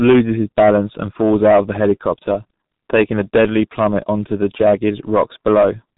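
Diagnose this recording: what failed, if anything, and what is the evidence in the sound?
The converter was overdriven by about 10 dB, causing hard clipping throughout the speech. Roughly one sample in twenty hits the ceiling and is sliced flat. Those squared-off peaks add high harmonics, heard as harsh fuzz on every loud syllable.

At the codec stage, the speech was squeezed through G.723.1, and the damage is heavy across the whole clip. Nothing survives above 3.8 kHz, so it sounds muffled. The slow-updating voice model leaves it hoarse with smeared consonants, which fits a bitrate near 6 kbit/s.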